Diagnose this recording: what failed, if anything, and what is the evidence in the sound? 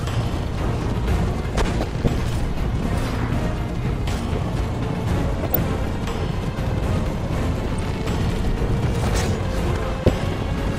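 DAB burbling occurs at 1.81–2.07 s, 5.43–5.59 s, 7.61–7.85 s and 9.83–10.14 s, a failure at the broadcast reception and MP2 decoding stage. Each burst lasts roughly 0.16–0.31 s of burbling over the sound. The reception was weak enough for bit errors, a few tenths of a percent, to slip past error correction into the audio data. Corrupted samples put short blips of noise in single sub-bands, and corrupted scale factors make sub-bands jump in level for up to a frame, with 10 to 14 frames hit in each burst.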